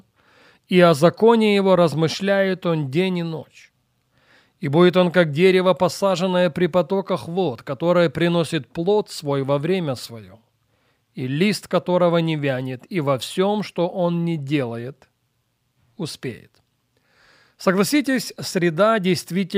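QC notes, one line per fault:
No faults heard.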